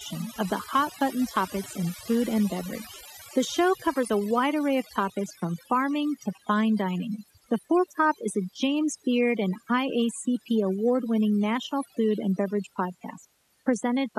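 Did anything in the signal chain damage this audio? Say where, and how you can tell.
Yes. Overdone noise removal at the call processing stage, throughout. Gaps hold twinkling specks. Quiet parts of the voice are lost because suppression gates away quiet bands.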